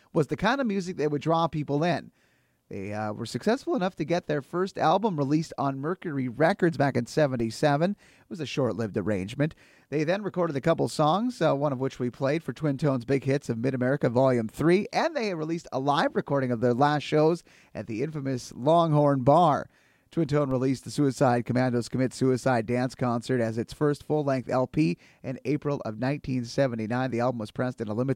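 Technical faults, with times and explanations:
7.40 s and 20.51 s, DC steps: just after "back in" and just before "released the", the waveform's zero line jumps by about -30 dBFS, then drifts back as a 20 Hz high-pass bleeds it away. Each gives a low thump, seen as a brief burst at the bottom of the spectrogram.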